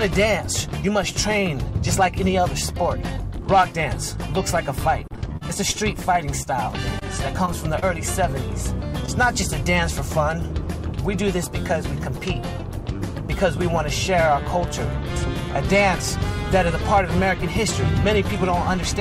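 From 5.07 to 5.76 s, repeated packet loss struck the stream: four separate gaps, the longest 39 ms, about 60 ms of audio missing in total. Each hole was patched by extending the preceding sound, so roughly a seventh of that stretch is synthetic, giving a choppy quality with pieces missing.

At 6.42 to 6.47 s comes the first short concealed packet loss. About 20 ms never arrived, and the receiver bridged it by continuing the last sound before blending back, heard as a brief smear or wobble. The same happens at 7.45 to 7.49 s, 7.79 to 7.84 s and 9.06 to 9.09 s, each again losing about 20 ms.

Between those, at 6.99 to 7.03 s, a short stall from a late packet occurs: a packet arrived 20 ms behind schedule, the jitter buffer ran dry, and the last sound was stretched until it landed. Nothing is lost, but the sound holds slightly too long with a slight buzz or dip.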